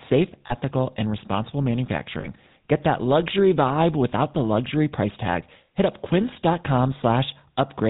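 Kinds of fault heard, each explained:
GSM full-rate codec: Plainly audible buzzy, gravelly roughness throughout, with nothing above 4 kHz. The 13 kbps coder models the vocal tract and drives it with regularly spaced pulses built from only a third of the excitation samples, so fine detail is lost.
Lost GSM frames: Brief rough, metallic rings at 0.46 to 0.55 s, just before "and responsible", and at 2.2 to 2.28 s, just after "and responsible". Each gap lasted about 40 ms, fitting two 20 ms frames, and was filled by repeating the last good frame.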